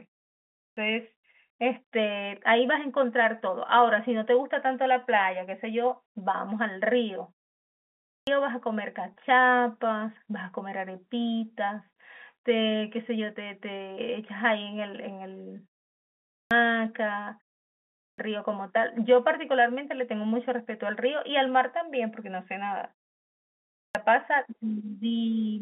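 Clipped starts after a pause at 0.33, 7.84, 16.06, 17.74 and 23.52 s: the output device wakes too slowly, swallowing roughly 0.43 to 0.45 s, so the waveform jumps abruptly from flat silence into speech. At 9.14 s, packet loss with pitch repetition bridges a 20 ms gap, probably a single lost packet, with a briefly held, buzzy repeated pitch cycle that shows as a short run of identical waveform periods and steady harmonics on a spectrogram.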